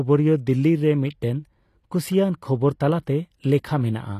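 A short speech clip with plainly audible HE-AAC compression damage running the whole way through: the top end stops dead at 15 kHz, and the treble above the crossover sounds copied up rather than real, so s sounds come out gritty and lispy. That's likely low-bitrate band replication, which fits something around 24 kbps.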